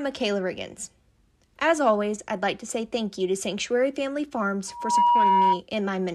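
A speech clip with loudspeaker feedback squeal from 4.67 to 5.61 s: a single 957 Hz tone swells over a fraction of a second to about 10 dB above the voice. Its steady self-building pitch sets it apart from a hum or whistle.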